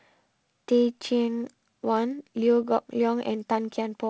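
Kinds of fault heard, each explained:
Nothing here counts as a fault; the speech comes through with the wideband telephone coding you'd expect, and nothing stands out beyond that.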